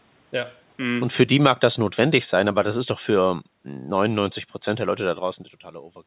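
From 0.79 s to 5.18 s the level drifts down by about 8 dB: automatic gain falling, where the gain control judged the input too loud or its background noise too strong and eased its gain back over those four seconds. Unlike a talker shifting position, which changes only the voice and happens here near 1 s and again near 5 s, the room noise sinks along with the speech, so the whole sound gets steadily quieter, not just the speaker.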